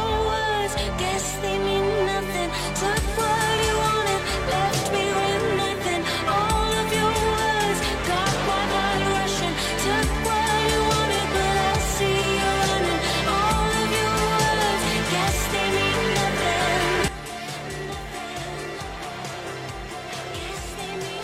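At 11.61 to 11.66 s the audio breaks up for about 50 ms, the sign of damaged data in a compressed stream. The decoder hits bytes it cannot parse, loses frame sync and resumes at the next valid header, so playback is briefly disrupted. Unlike a dropout or buffer underrun, which comes from data arriving too late rather than arriving wrong, this fault comes from the decoder misreading the damaged frames themselves. From 17.08 s to the end there is a sudden gain jump, with the level falling by about 10 dB from one sample to the next. The sound and its background noise drop together and stay there, which separates it from a fade, compressor action or a microphone moving away, since each of those changes level gradually or unevenly. The likely cause is a digital gain setting or bit shift applied without any ramp.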